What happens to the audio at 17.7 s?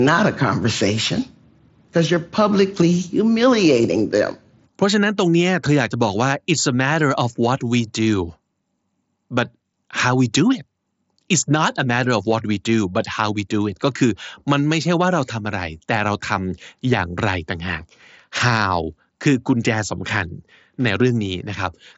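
At 17.7 s the speech carries on intact, passing through the Bluetooth mSBC headset codec with its top end stopping just below 7.7 kHz.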